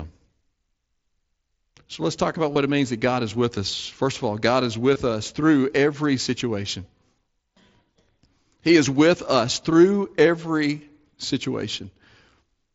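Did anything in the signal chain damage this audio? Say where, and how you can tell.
Yes: brief buzzy, held-level blips at 2.53–2.56 s after "let's talk about" and at 4.94 s before "us through every situation" are concealed Bluetooth headset packet loss, where the phone patched lost wireless frames with repeated recent waveform.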